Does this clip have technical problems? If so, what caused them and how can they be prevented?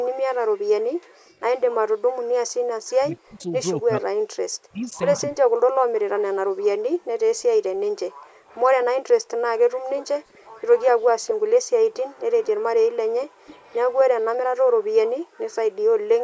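Yes. The background gated by the echo canceller drops the room sound by about 40 dB at 0.96–1.23 s, 4.31–4.36 s, 6.94–9.88 s and 13.28–15.4 s. To prevent it, set the canceller's residual suppression less aggressively and add comfort noise.

An echo leak is heard at 1.28–1.57 s, 3.39–3.43 s and 8.47–14.86 s as a distinct copy arriving 250 ms late, rather than diffuse reverb. It is faint early on and rises to roughly 20 dB below the speech in the long stretch. It is likely caused by the far end's echo canceller failing to fully cancel its loudspeaker pickup. To prevent it, the far end should use a headset or lower its speaker volume.

Speech suppressed in double talk appears between 2.97 and 5.58 s, where the talker's own voice dips by around 40 dB for about a second and a half in total. This differs from background gating, which removes only room sound. It likely happens because the canceller mistook overlapping talk for echo. 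To prevent it, use full-duplex echo cancellation with proper double-talk detection.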